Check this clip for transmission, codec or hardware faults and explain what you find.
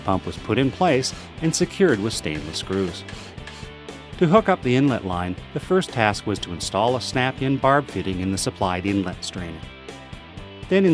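No transmission, codec or hardware faults can be heard anywhere in the clip, and the signal holds steady throughout.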